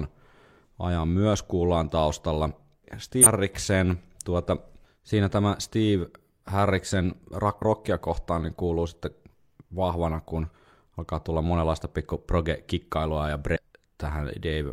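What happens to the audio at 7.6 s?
From 7.57 to 7.62 s there is damaged data in a compressed stream. The decoder misreads corrupted frames and loses sync, producing a brief chirp or blip.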